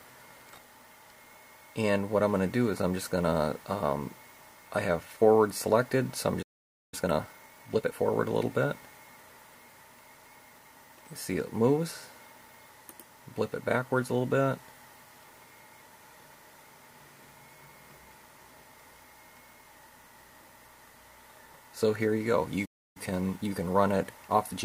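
At 6.42 s the sound stops mid-flow and stays silent for about 0.5 s, until 6.94 s. This is a playback stall, likely caused by the player running out of buffered data. A second stall silences the output from 22.65 s to 22.97 s, about 0.3 s.

Each gap is followed by time-compressed catch-up. Small pieces are cut out and cross-faded to clear the backlog. From 6.94 s to 7.94 s the sound runs at 1.5 times normal speed. From 22.97 s to 24.63 s it runs at 1.1 times. Pitch stays normal.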